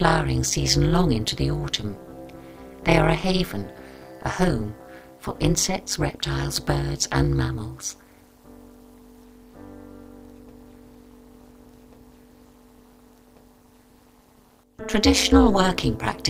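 From start to finish there's overlap-add ripple: the frames were windowed and rejoined with overlaps that don't sum to flat gain, so the level dips by about 60 dB once per frame, around 200 times a second, giving a harsh, metallic buzz over everything.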